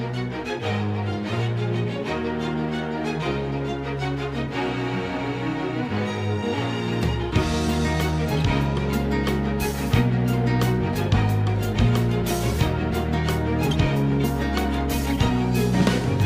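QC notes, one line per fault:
throughout: clock drift between sender and receiver. Faint timing unsteadiness runs through the audio, because the sender's clock runs roughly 4 percent faster than the receiver's.
0.13–9.74 s and 11.73–16.24 s: repeated timing corrections. Slight hiccups at uneven intervals push playback to 103 percent speed as the receiver trims short pieces from its overfilling buffer.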